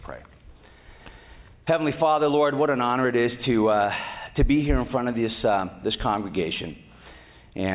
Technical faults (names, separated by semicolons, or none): none